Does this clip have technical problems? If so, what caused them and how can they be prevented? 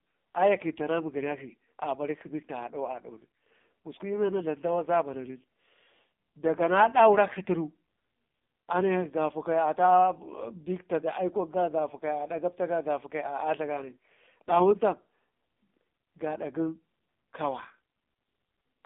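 Yes. The AMR narrowband mobile codec affects the whole clip. Nothing passes above 3.6 kHz, and the speech sounds buzzy and synthetic, which points to roughly 5.9 kbps. Record or transmit over a wideband or higher-bitrate path.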